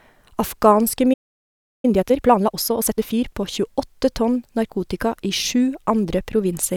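At 1.13 s the speech cuts to silence for about 0.70 s, a playback stall, likely from the player running out of data. From 1.85 to 3.25 s, time-compressed catch-up plays the backlog at 1.5 times speed, hurried but at normal pitch, built from spliced, cross-faded segments.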